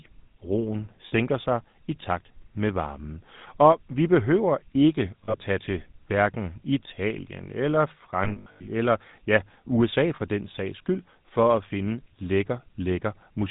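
Throughout, the speech carries the GSM full-rate codec. Nothing above 4 kHz survives, and the pulse-driven vocal-tract model leaves a plainly audible buzzy, gravelly roughness across the whole clip, which fits 13 kbps GSM full rate.

Lost GSM frames occur at 1.08–1.13 s just before "sig i takt med" (40 ms), at 5.24–5.43 s (100 ms scattered over 160 ms), at 8.24–8.70 s before "eller ja" (280 ms over 440 ms, longest run around 70 ms), and at 10.16–10.21 s before "den sags skyld" (40 ms). At each, the decoder repeats the last good frame, so the sound freezes into a rough, metallic ring.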